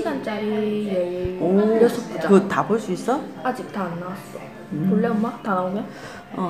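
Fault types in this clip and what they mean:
Loud pop: a single sharp transient from 1.25 to 1.28 s, peaking roughly 10 dB above the surrounding sound, which continues underneath it. The likely cause is a sudden voltage step, such as a plug, switch or static discharge, shaped by downstream circuitry.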